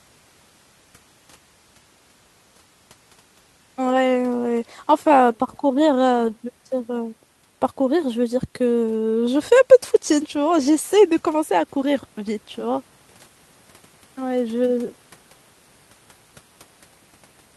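No technical faults are audible.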